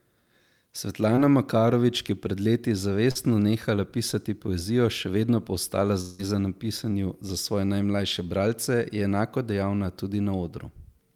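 Around 1.15 to 1.19 s, and again from 3.11 to 3.17 s, between "ki je pred leti" and "nehala pisati poezijo še", there's short concealed packet loss. A few hundredths of a second went missing, the decoder stretched the preceding speech over the hole, and you hear a quick smear.

From 6.01 to 6.21 s, after "še vedno pa ostala", the speech gives way to a fading synthetic continuation for about 0.18 s before "pisanju za svoje najmlajše" picks up, with what was said in between gone. That's likely a long network dropout, concealed almost end to end, so no silence opens up.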